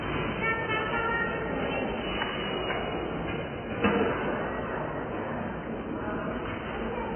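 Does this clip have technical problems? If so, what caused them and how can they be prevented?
Yes. AAC compression runs throughout: nothing above 3.1 kHz survives, leaving dull, smeared, warbling sound that fits a very low AAC-LC bitrate, likely around 12 kbps. To prevent it, encode at a much higher bitrate or use a lossless format.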